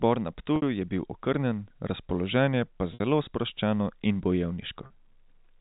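Speech with three brief dropouts from packet loss with pitch repetition, at 0.56–0.62 s, 2.94–3.00 s (just before "sproščeno in") and 4.86–4.90 s. Each gap of 60, 60 and 40 ms, consistent with 20 ms packets, is bridged by a repeated pitch period, giving a short held, buzzy tone on the 40 ms gap and a fade into silence on the two 60 ms gaps, over band-limited G.711 telephone audio.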